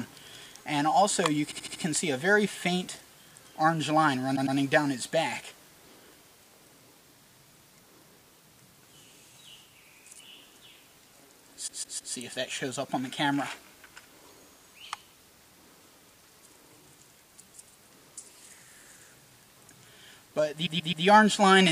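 Repeated frames stutter the sound at 1.50 s (a 78 ms block replayed four times), 4.35 s (105 ms, twice), 11.67 s (157 ms, three times) and 20.65 s (131 ms, three times). Identical compressed frames were resent, so each slice recurs and lengthens the audio rather than leaving gaps.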